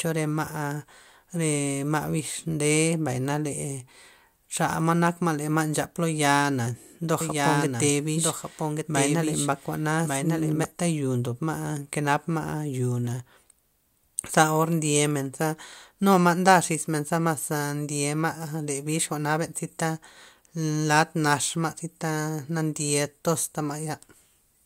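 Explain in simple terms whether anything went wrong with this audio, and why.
A doubled audio track appears from 7.21 to 10.65 seconds. For those few seconds the speech is heard twice: a second, somewhat quieter copy trails the original by about a second, so every phrase returns as a flat, clean repeat. It has no fading tail like a real echo in a room, and it cuts in and out suddenly. The likely cause is the same sound being picked up again through a slower route, or an edit that left two misaligned copies overlapping.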